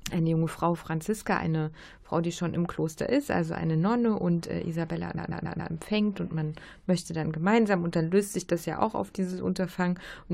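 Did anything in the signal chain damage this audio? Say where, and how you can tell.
Yes. Between 5.17 and 5.72 s, just before "und man möchte dann", a 139.3 ms block of speech plays four extra times, a stutter of repeated frames at the codec or storage stage, consistent with a run of about six compressed frames. It adds 0.56 s, whereas packet loss removes audio.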